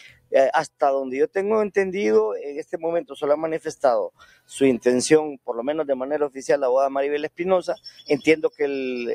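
From the first moment to the end, the level breathes and flutters: sustained material sinks while sharp onsets punch through, and tails thin out rather than decaying naturally, with the loudness swinging by something like 10 dB. This is a noise suppressor applied to music or sounds. A processor tuned for speech is reading steady tones and ambience as background noise and pulling them down, so held sound is attenuated while transients escape.

Four spots are hit harder, each a distinct dip where the sound collapses and then recovers: 0.02 to 0.32 s, falling by about 19 dB; 2.63 to 2.78 s, about 12 dB; 4.1 to 4.51 s, the deepest at about 21 dB; and 7.77 to 8.04 s, about 15 dB. Each is sound cut by the noise suppressor. There it judged the material to be noise outright and clamped it well below the surrounding level.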